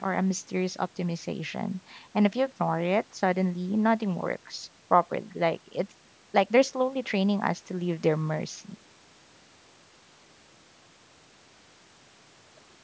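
Speech with no technical faults anywhere in the recording. It has gone through a call's microphone processing, which trims the lowest bass and leaves nothing above 8 kHz, as expected for that path.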